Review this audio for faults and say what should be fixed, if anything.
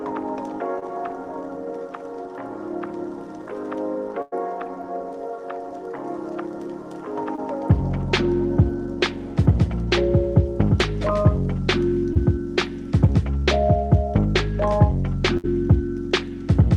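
Brief smears or wobbles at 0.79–0.84, 7.36–7.39 and 12.13–12.17 s are short concealed packet loss: about 20 ms never arrived, and the receiver filled each gap by extending the preceding sound.

A held buzz or fading hiss at 4.22–4.34 s and 15.37–15.46 s is a burst of packet loss. About 100 ms and 60 ms were lost, covered by decaying continuation, and the audio resumes with that stretch missing.

To prevent both, improve the network path or add jitter buffering and forward error correction so late or lost packets are recovered rather than concealed.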